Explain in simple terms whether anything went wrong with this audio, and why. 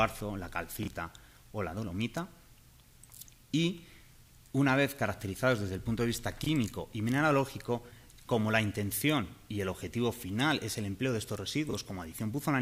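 Chunks out of order at 0.83, 6.42 and 11.69 s: each time, a short piece of sound about 21 ms long arrived one slot late and played after the piece meant to follow it. Nothing is missing, but the swap leaves a brief jumbled blip.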